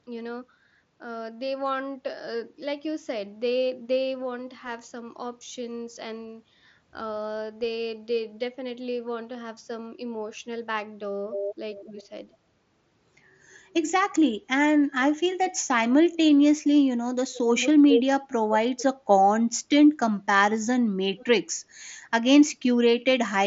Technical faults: echo leak; speech suppressed in double talk

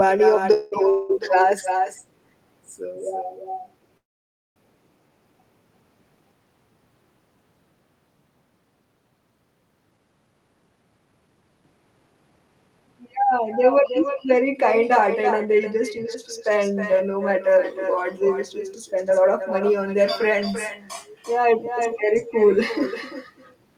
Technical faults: echo with no canceller; call audio freeze; jitter buffer speed-up

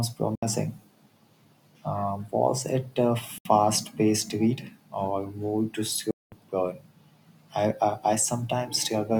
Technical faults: Bluetooth dropout

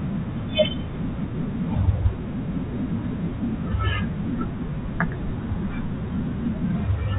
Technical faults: none

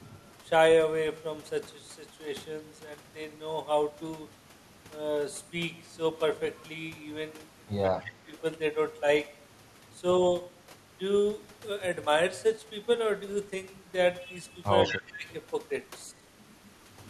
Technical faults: echo leak; speech suppressed in double talk

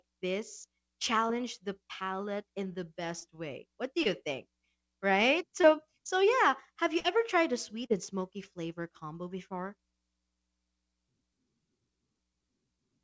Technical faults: short concealed packet loss; burst of packet loss

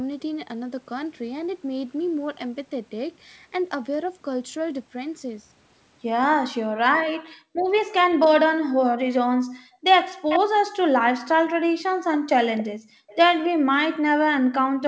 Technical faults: speech suppressed in double talk; background gated by the echo canceller; echo leak

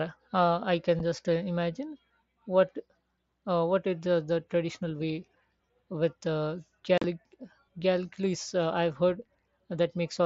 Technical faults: unconcealed Bluetooth headset packet loss

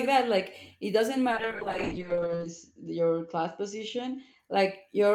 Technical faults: call bitrate drop

